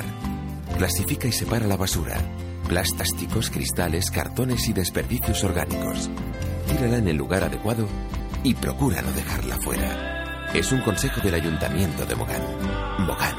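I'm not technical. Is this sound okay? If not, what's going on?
No. Overlapping chunks: the audio was handled in pieces that overlapped, so at 3.0 s a fifth of a second plays twice, heard as a brief stutter.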